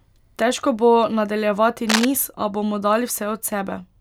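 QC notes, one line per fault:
1.89–2.05 s, cable scratch noise: A short burst of dense, ragged scratching sits over the speech for about 0.16 s. It is roughly as loud as the speech itself, so it cuts through clearly. The texture is uneven and crackly, not a steady hiss. This likely comes from a worn cable or connector being moved. Its contact resistance jumps about quickly, and each jump adds a small burst of noise to the signal.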